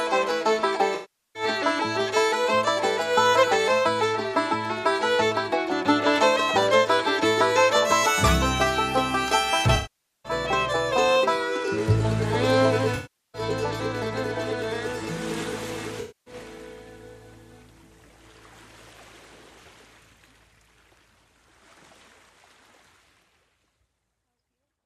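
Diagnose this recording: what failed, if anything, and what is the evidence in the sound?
Runs of AAC frames were lost in transit or decoding, and the decoder concealed them with AAC frame loss concealment, rebuilding audio from the last good spectrum. Smeared, phasey patches occur at 0.94–1.43 s, 9.75–10.32 s, 12.95–13.42 s and 16.00–16.34 s.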